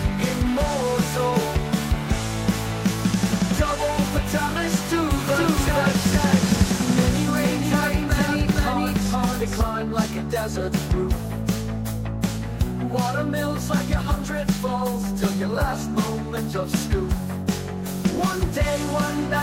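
The audio has two faults. A doubled audio track, likely from a second, slower capture path, adds a full-band copy about half a second late and about as loud, from 5.27 to 9.61 s, starting and stopping abruptly. Corrupt frames decoded anyway put energy at wrong frequencies: a faint error at 10.17 to 10.21 s and a much louder one at 13.77 to 13.80 s.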